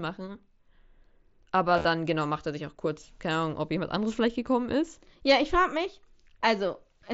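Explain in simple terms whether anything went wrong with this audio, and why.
Between 1.74 and 1.85 s, just before "genau macht er sich", there is concealed Bluetooth headset packet loss: short gaps, the longest about 30 ms, were patched by repeating the last bit of sound. Unlike a plain dropout, you hear no silence, only a brief buzzy, slightly warbling stretch.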